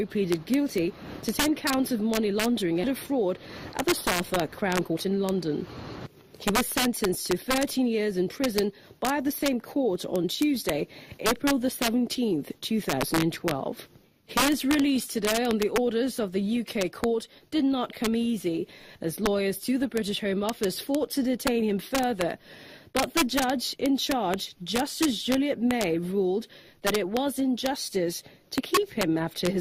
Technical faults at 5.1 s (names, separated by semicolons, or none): integer overflow; jitter buffer speed-up